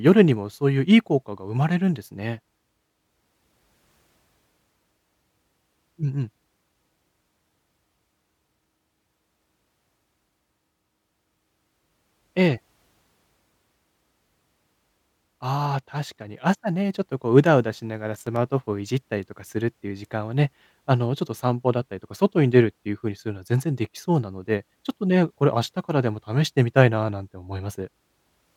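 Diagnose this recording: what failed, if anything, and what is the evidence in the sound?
Processor overload crackle at driver/buffer stage, 18.14 to 18.36 s: several sub-millisecond buffers missed deadlines and replayed old audio, showing hard-edged waveform splices and broadband vertical spectrogram streaks.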